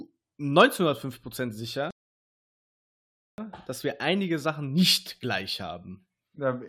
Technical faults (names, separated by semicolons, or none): playback stall